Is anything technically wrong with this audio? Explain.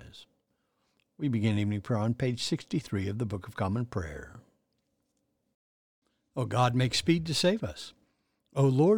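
No, nothing technically wrong can be heard anywhere in this speech recording.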